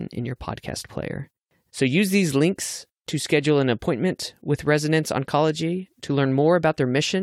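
Nothing in the recording stood out as a technical fault on listening.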